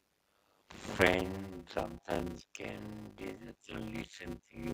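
Speech runs through the whole clip with a steady 100 Hz buzz. That is a block size mismatch (padded) fault. Each block is filled with zeros after shorter writes, which fits 256-sample writes. The gaps slow the speech to about 0.53 times normal speed, while the timbre stays. From 1.87 to 2.62 s, and again from 3.28 s to the end, the speech dips and breaks up in pieces. The deepest drops are around 15 dB, and the first stretch is affected for about 0.3 s in total. The likely cause is speech suppressed in double talk. An echo canceller heard both sides at once and turned the talker down.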